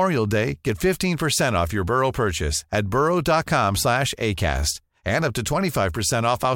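No technical faults can be heard anywhere in the speech recording, and the signal stays steady and intact throughout.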